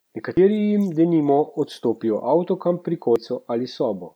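At 0.37 s and again at 3.16 s the speech jumps abruptly, with no gap of silence. Each is a dropped buffer (overrun): the likely cause is that the recording software failed to read its samples before the hardware overwrote them, so roughly a tenth of a second of audio vanished and the surrounding material was spliced directly together, clipping part of the ongoing sound.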